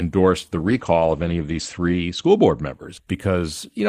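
From 0.56 s to 2.79 s, a call bitrate drop forces coarser coding. The speech turns rough and muffled, which fits a fall from 32 to 15 kbps. On a spectrogram, energy above 8 kHz (previously reaching 20 kHz) vanishes for about 1.5 s before returning.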